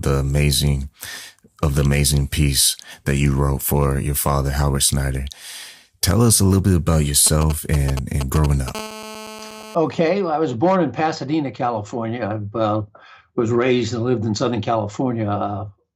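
A nearby 2G phone sending short signalling bursts, rectified by the audio circuit, produces GSM signalling bursts from 7.27 to 8.70 s: galloping ticks and brief 217 Hz buzzes, roughly ten decibels below the sound. From 8.75 to 9.75 s the phone transmits in bursts 217 times a second as in a call, giving GSM phone buzz: a steady, raspy, harmonic-rich 217 Hz drone about 14 dB below the sound.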